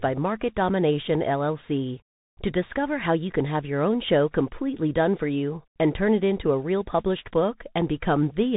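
Speech that sounds boxed-in and grainy from start to finish, with scratchy s sounds, a granular hiss under the voice and nothing above about 3.8 kHz: the mark of a Bluetooth CVSD headset codec, whose one-bit delta coding fits a 64 kbps link.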